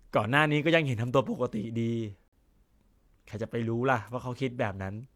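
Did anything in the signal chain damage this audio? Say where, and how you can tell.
Yes. A corrupt frame was muted from 2.28 to 2.36 s in this speech clip, at the codec stage. The speech drops abruptly to silence for about 80 ms, a gap that points to a single lost frame, and resumes on schedule with no shift in timing. That pattern shows damaged compressed data: flipped bits left a frame the decoder could not accept, so the player substituted silence for its whole length instead of skipping or stretching.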